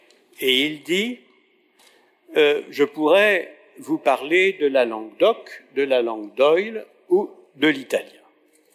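No technical faults are audible.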